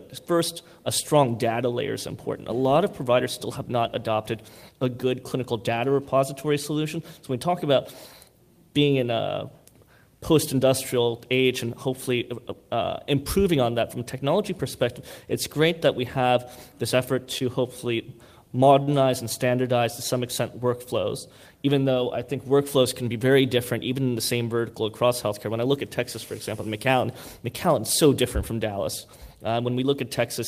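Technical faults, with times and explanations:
17.38 to 17.42 s, short concealed packet loss: 20 ms of audio arrived too late to play, so the decoder extrapolated the preceding sound, leaving a brief smear.
18.83 to 18.92 s, short stall from a late packet: the jitter buffer ran empty, so the last sound was stretched by 43 ms until the packet arrived. Nothing is lost, but it is audibly held too long.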